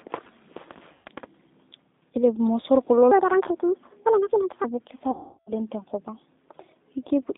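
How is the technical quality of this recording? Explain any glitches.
The recording has clear technical problems. It is speech carried over a low-bitrate phone codec, with two dropouts covered by concealment and one section played too fast.

G.729 codec damage runs through the whole clip. This 8 kbit/s codec rebuilds speech from a vocal tract model and a few pulses per frame. Here the band is limited to roughly 250 Hz to 3.7 kHz. The voice sounds thin, rough and plainly synthetic.

VoIP packet loss concealed by the speech codec occurs twice. The first is from 0.93 to 1.07 s, with about 120 ms missing. The second, from 5.11 to 5.52 s, is worse, with about 360 ms missing. The decoder repeats its last pitch and filter at falling gain. Each gap turns into a fading buzzy tone or coloured noise, and the speech stays weak briefly afterward.

A section at the wrong speed runs from 3.11 to 4.64 s. 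It plays 1.6 times too fast, so pitch rises by about seven semitones. The voice sounds high and hurried. This is likely a clock mismatch during editing or playback.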